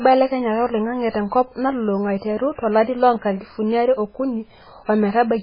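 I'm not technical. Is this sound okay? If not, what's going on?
No. Heavy squeezing to save space, likely MP3 compression, runs the whole way through, so this speech loses everything above 5.2 kHz and sounds dull, watery and swirly.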